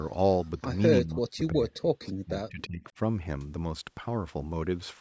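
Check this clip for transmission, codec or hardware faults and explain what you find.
One fault stands out: speech suppressed in double talk, from 1.02 to 2.98 s. The echo canceller, likely unable to separate the near talker from loudspeaker echo while both sides spoke at once, turned the whole signal down. The speech dips by up to about 40 dB for roughly one and a half seconds in total. The 8 kHz upper limit and trimmed low bass come from the call microphone processing, which is normal.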